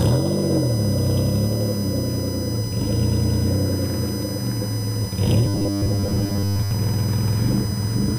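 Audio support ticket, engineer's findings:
USB whine, present for the whole clip. Fixed-pitch tone series on 1 kHz and its multiples, strongest at 5 kHz, about 15 dB below the signal. Spectrogram: steady horizontal lines every 1 kHz, brightest at 5 kHz. Component: USB bus 1 ms frame current leaking through power or ground.

Robotic sound from repeated short buffers, 5.45 to 6.71 s. Rigid metallic buzz at 100 Hz laid over the sound. Likely cause: buffer underrun, with the last 10 ms block replayed over most of the stretch while real audio is skipped. Waveform: identical 10 ms segments back to back. Spectrogram: comb of 100 Hz harmonics.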